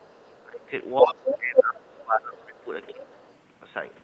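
A faint second voice sits far under the speech from 0.0 to 0.4 s, and returns from 2.87 to 3.35 s. Brief scraps at 0.99 to 1.07 s and 1.57 to 1.63 s are as loud as the talker or louder, and 1.24 to 1.38 s is only slightly quieter. This is the other side's voice leaking through, likely loudspeaker playback that the echo canceller left in the microphone signal.

The talker's own voice dips sharply, by roughly 25 dB at its deepest, from 0.4 to 0.72 s and again through most of 1.0 to 2.71 s. It dips less, by roughly 15 dB, from 2.92 to 3.1 s. That pattern points to speech suppressed in double talk, likely the canceller turning everything down while both sides spoke.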